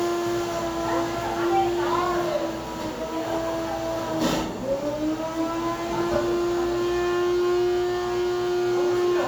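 No technical faults are audible in this recording.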